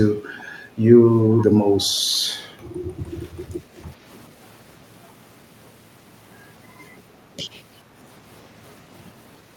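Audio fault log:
2.71–2.94 s, background gated by the echo canceller: the room sound behind the speech dips for roughly a fifth of a second, falling by about 6 dB at its deepest before recovering. While the far-end loudspeaker was active, the echo canceller judged the microphone signal likely to contain echo and pulled its level down hard. The ambient bed is ducked along with it, so the background briefly hollows out, then swells back once the canceller releases its suppression.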